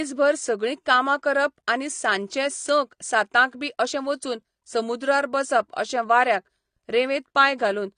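Throughout the speech, nothing survives above about 9.7 kHz, and sibilants and held vowels carry a warbling, fizzy smear. That texture, unlike a clean low-pass filter's simple dullness, points to AAC compression, likely AAC-LC at a low bitrate near 32 kbps.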